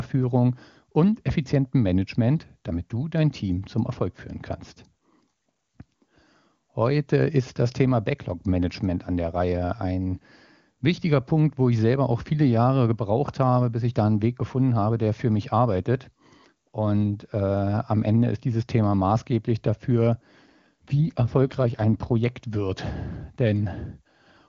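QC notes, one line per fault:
20.42 to 22.18 s, AMR rate drop: just after "maßgeblich dafür" the speech turns rougher and more synthetic for under two seconds, then snaps back. The bandwidth stays put and nothing drops out, so it's the wideband codec stepping down from what sounds like its top 23.85 kbit/s mode to around 8.85 kbit/s, probably to spend bits on error protection over a shaky radio link. Fewer bits for the vocal-tract model means that coarse, buzzy edge.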